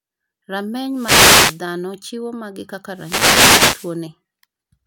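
Speech, hit twice by wireless microphone noise hits, from about 0.90 to 1.64 s and again from 2.90 to 4.00 s. Each is a swish of static as the analogue FM radio link fades, reflections cancelling the signal and letting receiver noise rise.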